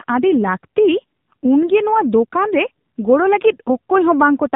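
AMR narrowband mobile codec damage runs through the whole clip, from start to finish. The speech has been squeezed through a 2G/3G-style phone codec that samples at 8 kHz, so nothing above 4 kHz survives and sibilants lose their edge. Each 20 ms frame is rebuilt from a vocal-tract model excited by a handful of pulses. The plainly audible buzzy, synthetic texture fits one of the lower modes, around 7.4 kbps.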